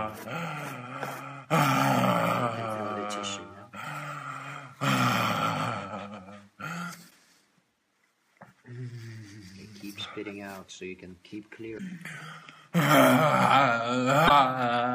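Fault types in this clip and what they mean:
Damaged data in a compressed stream: part of the encoded stream arrived corrupted, so the decoder misread those frames, lost sync and had to hunt for the next valid frame header before playback could resume. In this clip that shows as three short glitches, each roughly 55 ms long, at 7.07 to 7.12 s, 11.74 to 11.80 s and 14.25 to 14.31 s, cutting abruptly into the surrounding audio.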